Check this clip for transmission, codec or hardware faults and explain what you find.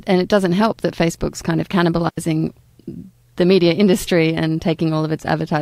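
A digital wireless dropout cuts through this speech clip from 2.09 to 2.18 s. The radio link lost too much data, so the receiver muted for about 89 ms with a very quick fade, leaving a clean hole of near silence, with no noise burst on either side.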